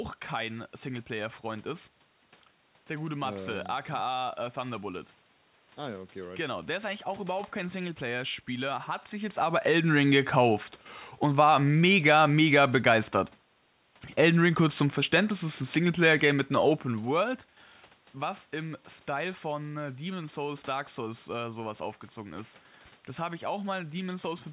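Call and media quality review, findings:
No technical faults heard.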